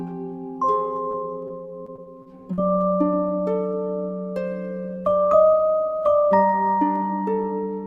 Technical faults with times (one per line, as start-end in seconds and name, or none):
0.51-7.86 clock slip clicks
1.11-2.60 repeated packet loss (robotic sound)